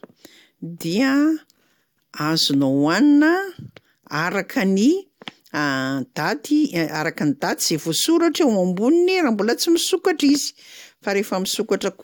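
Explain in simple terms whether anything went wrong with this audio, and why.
Nothing went wrong in this speech recording that a listener can pick out. At no moment does the sound falter or change in a way that points to a technical problem.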